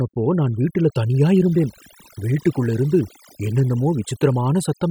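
Overdone noise removal runs through the whole speech clip. A noise reduction stage was set too strong. It pushes frequency bands down whenever they sit near its noise estimate. Quiet parts of the voice vanish with them. The background drops and breaks up into twinkling specks.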